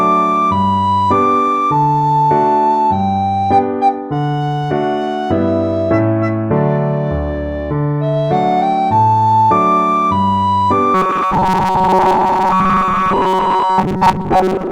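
From 10.94 s right through to the end at 14.72 s, the sound turns into a rigid, metallic buzz: classic robotic sound from repeated short buffers. It's pinned at about 188 Hz, which points to a chunk of roughly 5.3 ms being looped over and over, with most of what should be there skipped. The likely cause is new audio arriving too seldom, so playback keeps refilling the gap with the last tiny slice it had.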